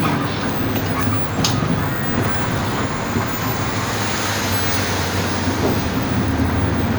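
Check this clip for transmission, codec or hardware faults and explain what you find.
Nothing here points to a transmission, codec or hardware problem; these everyday sounds come across steady and intact the whole way.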